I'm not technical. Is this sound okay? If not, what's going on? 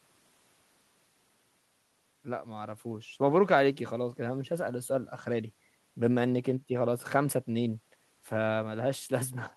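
Yes, this speech recording sounds fine, with nothing going wrong that needs explaining. There is no moment anywhere in it where the sound is interrupted or damaged.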